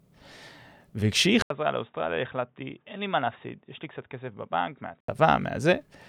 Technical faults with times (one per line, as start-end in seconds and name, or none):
1.42-5.08 input switched to a poorer device